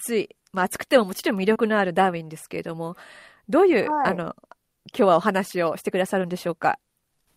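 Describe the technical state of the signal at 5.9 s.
At 5.9 s the signal is intact, with no dropout, distortion, glitch or other technical fault at that moment.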